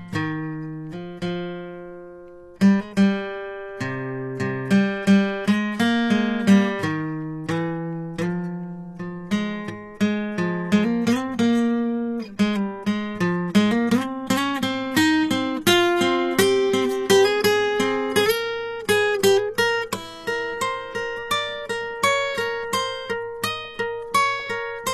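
From start to finish the music carries the sound of HE-AAC compression at a low bitrate, likely the cause of what is heard. Only the lower spectrum seems truly coded. The treble is rebuilt by copying lower bands upward, so its harmonics no longer line up with those below, and the top end sounds gritty and metallic. On a spectrogram the upper region looks like a smeared, repeated copy of the lower bands, and nothing appears above about 14.9 kHz.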